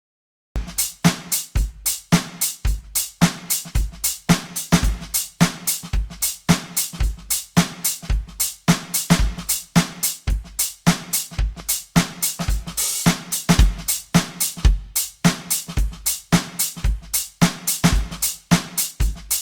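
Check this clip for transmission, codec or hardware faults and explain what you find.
Three faults are present in this music clip.

Cut-off start: the music begins at 0.56 s straight out of digital silence, mid-sound, with no attack or fade. This points to a late-starting capture rather than a gentle fade-in.

Generation loss: throughout, the music sounds swirly, smeared and hollow, with blurred attacks. This is likely from repeated lossy re-encoding, fitting Opus at 64 kbit/s decoded and encoded again roughly seven times. Content still reaches 20.2 kHz, so this is not a single low-bitrate encode with a lowered top end.

Loud pop: at 11.60 s a single sharp pop rises about 5 dB above the music, which carries on underneath. That points to a likely voltage spike, unlike a dropout, where the sound itself breaks off.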